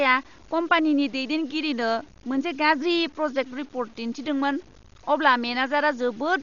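A grainy distortion runs through the whole speech recording. It follows the speech and changes with it. Quiet passages turn gritty, and the softest moments sputter or drop out. The rounding error sits at about 30 dB below the signal. This is low bit depth without dither, likely from truncating to 8 bits. With no dither added, the error stays tied to the signal instead of forming a steady hiss.

A second fault is present from start to finish. Nothing survives above 6.9 kHz, so the speech sounds dull and closed in. A rough, fluttering noise clings to the voiced tones. The damage is heavy. This points to Dolby Digital compression at a very low bitrate, likely around 40 kbps. The encoder narrowed the band and starved many frequency lines of bits. The decoder filled them with noise.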